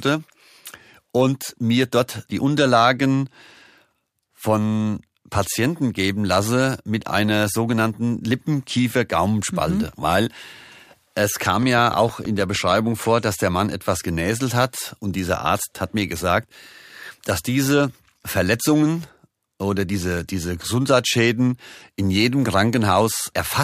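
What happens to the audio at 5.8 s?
Nothing goes wrong at 5.8 s: the speech carries on cleanly through that moment, with no dropout, click, distortion or other fault to be heard.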